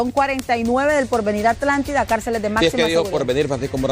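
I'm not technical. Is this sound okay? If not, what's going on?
No. There are three bit error spikes, sharp isolated ticks at 0.39 s, 1.88 s and 2.86 s, the first one loudest. Each comes from a single flipped bit in the digital data, making one to three samples jump wildly and snap back.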